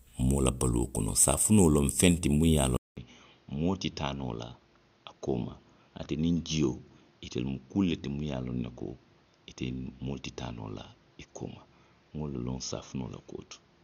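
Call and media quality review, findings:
Speech dulls from 2.77 s to end: nothing above 6.7 kHz, 200 ms gap at the change, new noise floor roughly 30 dB down, level a few dB lower. Likely input switched to a poorer device; a codec bandwidth drop would bring no gap or new noise.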